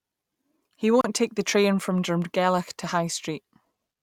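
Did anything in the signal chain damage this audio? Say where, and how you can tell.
Yes. A gap at a join of encoded pieces (codec stage) leaves a 32 ms gap at 1.01 to 1.04 s, before "take the train from". Untrimmed encoder delay and padding cause it. Unlike a dropout, the speech resumes without loss.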